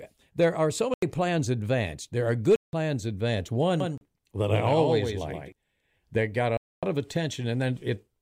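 Blocks of digital silence break up this speech recording at 0.94 to 1.02 s (85 ms, between "there are so" and "plans advanced"), 2.56 to 2.73 s (171 ms), 3.98 to 4.01 s (35 ms) and 6.57 to 6.83 s (256 ms, after "that got"). In each, the signal drops straight to silence and returns with no fade, leaving an audible hole. The 85 ms and 171 ms lengths fit 4096- and 8192-sample blocks, which points to output buffers not being filled in time. A doubled audio track runs from 3.80 to 5.52 s, ending just before "that got". A full-band copy of the speech trails roughly 150 ms behind, around 5 dB quieter, with no reverberant tail or room colouring, and it switches in and out abruptly. This is likely a second capture path or an edit leaving two misaligned copies.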